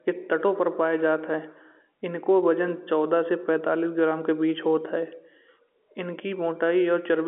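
Nothing stood out on listening to this speech, which comes over the narrow telephone band of an ordinary G.711 line with little above about 3.4 kHz.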